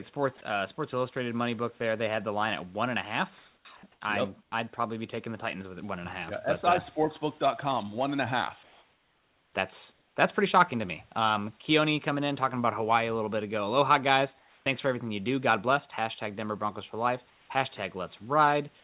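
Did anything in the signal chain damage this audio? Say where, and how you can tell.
Yes. Sound dropped by the voice detector at 0.38–0.41 s: 30 ms becomes flat noise, likely sender call processing misjudging sound as background. The spectrogram shows a blank notch.

Sound chopped by the voice detector from 3.38 to 4.01 s, between "at one and a" and "I yep I'd probably". The detector likely toggled repeatedly, leaving a ragged, gapped waveform envelope.

Comfort noise in place of the background at 4.43–4.52, 8.63–9.53, 9.92–10.16, 14.39–14.66 and 17.30–17.48 s. This is likely discontinuous transmission. The spectrogram shows smooth, featureless noise, up to about 12 dB quieter.

A loudspeaker feedback squeal runs from 5.92 to 8.25 s at 6.4 kHz. It is an acoustic loop between speaker and microphone, swelling over about two seconds to slightly above the speech. The spectrogram shows one brightening horizontal line.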